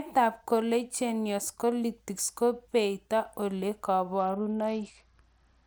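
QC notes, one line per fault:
4.19–5.67 s, Bluetooth SBC bit pool drop: right through to the end the treble goes dull and a gritty grain creeps in, which fits the bit pool falling from around 28 to 8, about 72 kbps, starving the top sub-bands and coarsely quantising the rest.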